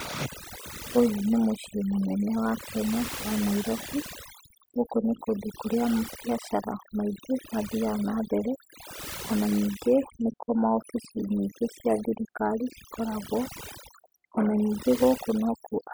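Overdone noise removal runs through the whole of this speech clip. A noise reduction stage set too aggressively is cutting individual frequency bands down hard, or out entirely, whenever their level sits close to its estimate of the background noise. Because the softer components of the voice fall in that same range, they are stripped away too. The gaps between phrases collapse into near silence dotted with twinkling specks.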